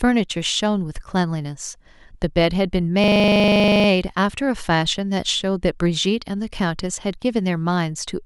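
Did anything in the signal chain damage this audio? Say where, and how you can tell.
Yes, at the driver or buffer stage. From 3.04 to 3.88 s, one 40 ms slice of speech repeats 21 times, giving a buzzy stutter at 25 Hz. That is a system hang loop: the driver stalled while the hardware replayed its ring buffer, which points to a 40 ms buffer.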